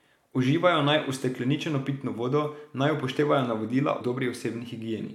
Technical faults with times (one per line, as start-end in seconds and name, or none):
4.00 compressed frames skipped